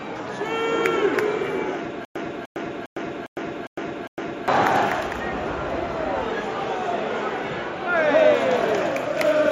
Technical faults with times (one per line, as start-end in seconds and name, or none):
2.05-4.48 stutter with silent gaps